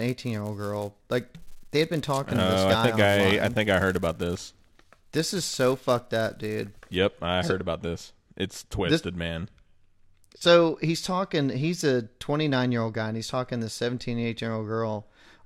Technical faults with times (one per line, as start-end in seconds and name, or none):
0.00-6.98 filter restarted on every block